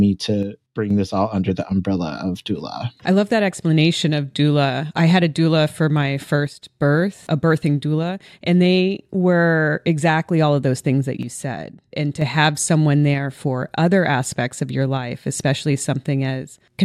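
At 0.43 to 0.90 s, 6.47 to 6.82 s and 11.23 to 12.22 s, the speech abruptly falls about 6 dB, then snaps back. One channel likely drops out before the mono sum.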